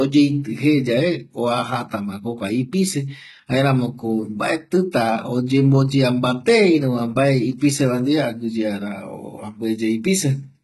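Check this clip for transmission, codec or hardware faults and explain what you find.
One fault runs through the whole clip: low-bitrate audio saved at a high bitrate. The speech was likely squeezed through a very low-bitrate codec first, something like 16 kbit/s HE-AAC, and then re-saved as a high-bitrate MP3. The second encoding keeps everything it receives but cannot rebuild what the first stage threw away. Nothing is present above about 11.8 kHz, so the speech sounds dull and band-limited despite the large file.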